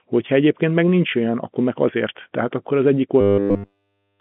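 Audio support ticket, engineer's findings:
Robotic sound from repeated short buffers, 3.21 to 4.20 s, right after "akkor az egyik". Fixed 100 Hz metallic buzz, which fits one 10 ms block looped almost continuously to the end. Likely cause: audio arriving too seldom at the playout side. Unlike G.711 telephone band-limiting, which is steady and present here, this is a rigid pitch artefact.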